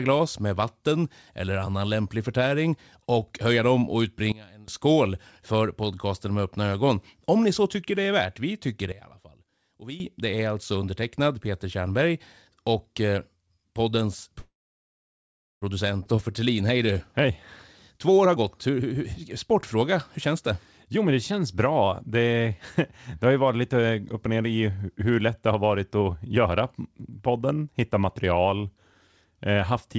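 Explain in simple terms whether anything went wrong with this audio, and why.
Several things go wrong in this speech recording, all around the way it was carried and played back.

Sudden gain jump: from 4.32 to 4.68 s, and again from 8.92 to 10.0 s, the speech and background drop together to a much quieter level and then snap back. The likely cause is a volume change applied instantly rather than faded in.

Call audio freeze: from 14.40 to 15.64 s the speech stops and is filled in, with about 1.1 s of near-silence, then resumes where it left off. Nothing is lost, but a pause of about 1.2 s is inserted. The likely cause is packets held up so the jitter buffer ran dry.

Skip ahead: at 16.04 to 16.07 s playback jumps forward. Roughly 0.7 s of speech is dropped, and the audio on either side is joined almost directly. This fits a stretch being discarded while later audio was already waiting.

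Jitter buffer slow-down: from 16.16 to 16.94 s the speech runs at 90% speed with unchanged pitch, so sounds are drawn out. About 83 ms was added by repeating small pieces of the sound to rebuild the buffer's reserve.

Jitter buffer speed-up: the receiver trims short pieces to reduce built-up delay, so speech sounds hurried at normal pitch. This happens at 17.25 to 17.32 s at 170% speed, from 17.98 to 19.75 s at 120% with roughly 0.4 s removed, and from 20.97 to 21.83 s at 106%.

Throughout, the call codec (G.722) leaves nothing above 8 kHz, which is expected for this kind of call link.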